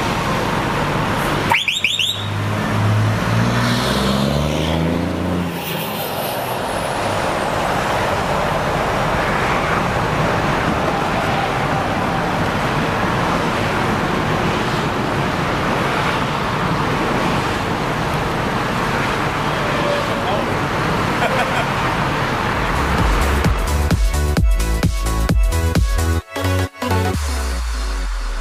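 No technical fault can be heard anywhere in this audio.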